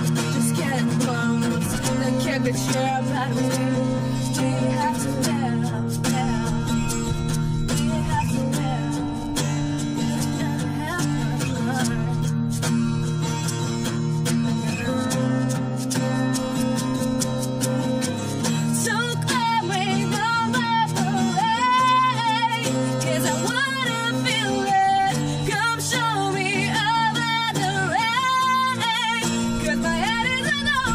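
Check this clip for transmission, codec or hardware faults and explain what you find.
No faults turn up anywhere in this clip.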